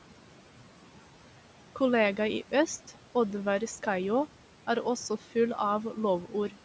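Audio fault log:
Throughout, noise suppressor artifacts: the background noise drops by about 11 dB between phrases and comes back up under the speech. The suppressor judges each frequency band, frame by frame, to be steady noise or not. A gate, by contrast, would switch everything off at once. The room noise, sitting about 19 dB below the speech, is what gets pumped, inside a band that stops at 8 kHz.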